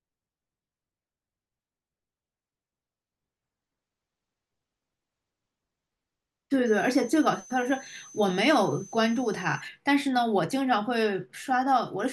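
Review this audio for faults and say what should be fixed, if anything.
A thin, high whistle sits under the speech from 6.66 to 9.61 s, wandering slightly between about 6.1 and 6.2 kHz at roughly 25 dB below the signal. This is switching supply whistle: a nearby switch-mode power supply dropping into an audible burst-mode frequency, or two supplies beating against each other. Powering the recording chain from a linear or well-filtered supply, and keeping switching adapters away from the audio cabling, would prevent it.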